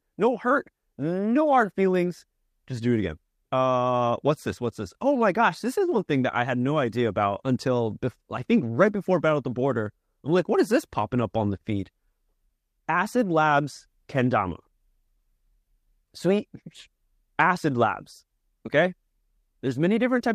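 No dropouts, glitches or other transmission or processing faults are audible anywhere in the speech.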